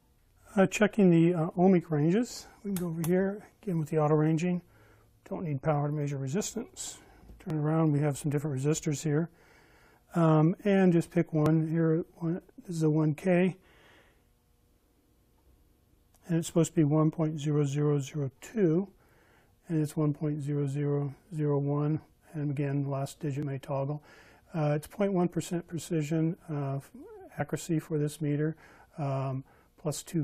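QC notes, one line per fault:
3.52, 7.50, 9.48, 11.46, 15.46, 19.44, 23.43, 27.40 s: overlap between stream segments. At 2 s segment joins, 5 to 17 ms of sound is trimmed away, so the waveform jumps and is heard as a tiny skip.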